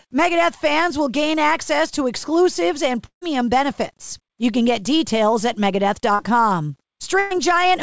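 From 3.06 to 3.23 s the speech stops and the last sound trails on as a fading buzz or hiss, then about 90 ms of silence, and roughly 160 ms of speech never returns. This is likely a long network dropout. On a spectrogram the last sound smears into a flat, dimming band before a blank gap. The waveform shows shrinking amplitude, then a flat line.

At 6.15 to 6.21 s a short concealed packet loss fills about 34 ms with a continuation of the preceding sound. Some 40 ms of real audio is gone, heard as a brief wobble or smear. The spectrogram shows a short stretch of repeated, slightly blurred texture, with no visible break in the waveform.

From 7.19 to 7.32 s a burst of packet loss removes about 120 ms. The receiver covers roughly 116 ms by holding the last sound and turning it down, with no silence before speech resumes further along. Across the 8 kHz ceiling of the call codec, the spectrogram shows a smooth, decaying patch replacing the normal detail. 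The waveform tapers, then jumps back.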